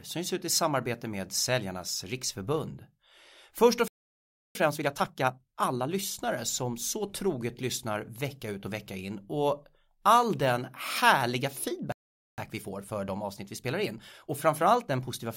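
The speech cuts to silence from 3.88 to 4.55 s, a gap of about 0.67 s. This is a playback stall, likely the player running dry of data or its thread being blocked. Right after, from 4.55 to 5.89 s, the speech runs hurried at unchanged pitch, roughly 1.5 times normal speed, ending just before "som så troget". That is time-compressed catch-up: the player trims its backlog by cutting out short slices and cross-fading the joins. After "och all den härliga" the pattern repeats. A second playback stall from 11.92 to 12.38 s silences the speech for about 0.46 s, likely from the same data starvation or blocked thread. A gentler catch-up at about 1.15 times speed then runs from 12.38 to 15.26 s.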